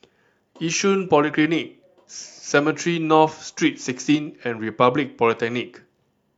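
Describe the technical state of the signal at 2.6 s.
At 2.6 s the signal is intact, with no dropout, clipping, glitch or other fault in the speech at that moment.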